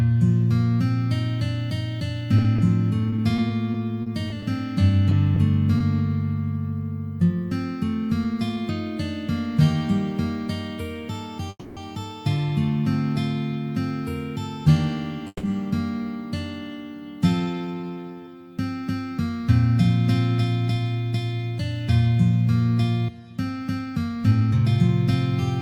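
Repeated packet loss (robotic sound) runs from 2.37 to 5.82 s: the audio breaks into a choppy texture as 14 short holes, none longer than 40 ms, are each patched by stretching out the preceding sound. About 8% of that stretch is concealment, totalling 270 ms of filled-in audio, and 180 ms of the original sound is lost for good because those packets were lost. Call audio freezes occur at 11.50 to 11.79 s and 15.27 to 15.45 s. The sound stalls and the last fragment carries on as a fading buzz or hiss, ending in about 40 ms of silence before playback resumes exactly where it stopped. The likely cause is packets held up in transit until the jitter buffer emptied. That inserts a 270 ms pause and then a 160 ms pause, and nothing is skipped. A jitter buffer speed-up follows from 23.79 to 24.89 s. The receiver trims its excess queued audio by cutting out many tiny pitch-period slices in succession, so the sound plays about 9% fast at unchanged pitch and comes across as hurried. 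Roughly a tenth of a second is removed over that span.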